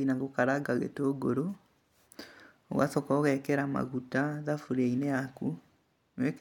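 Speech recording with no technical faults heard anywhere in the clip.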